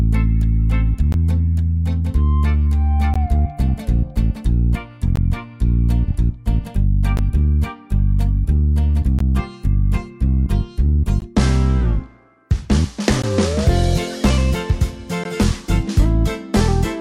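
Short silences of about 16 ms break the continuous sound at 1.12, 3.14, 5.16, 7.17, 9.19, 11.2, 13.22 and 15.24 s. They come roughly every 2 s. Each is a gap at a join of encoded pieces. The pieces were encoded separately. Each kept its encoder's start delay and end-frame padding.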